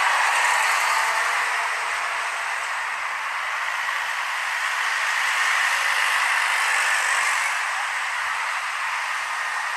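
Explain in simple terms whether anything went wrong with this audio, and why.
Nothing went wrong with this recording of sounds. At no point does anything in it point to a technical problem in how the audio was captured or passed along.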